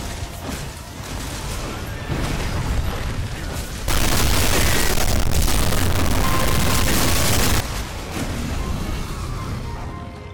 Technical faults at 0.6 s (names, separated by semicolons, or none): none